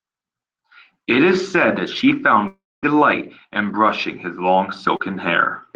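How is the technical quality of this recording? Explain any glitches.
The recording has two network glitches: one long break and one very brief smear.

From 2.47 to 2.85 s, right after "is said that she", the sound stretches into a fading buzz or hiss and then goes fully silent for about 0.24 s before resuming, with the missing stretch simply gone. This is likely a long network dropout. About 360 ms of audio never arrived, and the receiver briefly continued the last sound before giving up and leaving a gap.

Between 4.97 and 5.13 s, just after "in brushing his long", there's a quick smeared wobble. This is short concealed packet loss: roughly 40 ms of audio failed to reach the decoder in time, and the receiver patched the hole by extending the preceding sound and blending back into the real signal. The patch also stretched the timing very slightly, by around a hundredth of a second.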